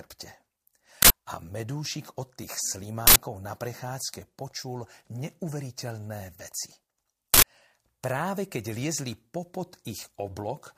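Harsh, loud digital noise bursts, each 85 ms, at 1.02, 3.07 and 7.34 s: an uninitialised buffer playing leftover memory, which fits a 4096-sample block.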